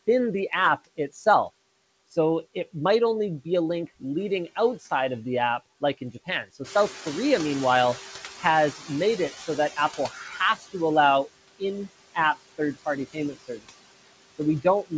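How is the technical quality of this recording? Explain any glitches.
The recording has audible noise-suppression problems: constant processing artefacts, a slow adaptation when the background gets louder, and three places where speech is turned down along with the noise. The band stops at 8 kHz, which fits a G.722 call codec at 64 kbps.

Noise suppressor artifacts run through the whole clip. The suppressor pulls down whatever frequency bands it judges to be steady noise, frame by frame, by about 16 dB. The background dips between phrases and swells under them.

Noise suppressor catching up occurs from 6.64 to 10.21 s. The room noise jumps by about 11 dB near 6.5 s, and the suppressor's noise estimate needs about 3.6 s to follow. The louder background first comes through with less reduction, then gradually sinks by about 13 dB as the estimate settles.

Speech cut by the noise suppressor happens at 9.97–10.4 s, 10.56–10.75 s (just before "allow in app third") and 13.13–13.66 s (just after "in app third party"). 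The suppressor mistakes parts of the speech for noise and cuts them by about 11, 12 and 18 dB. Roughly 100 to 200 ms of each stretch sounds swallowed or faint.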